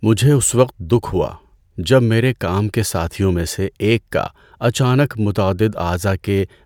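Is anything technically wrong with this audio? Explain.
No, the speech signal shows no technical faults.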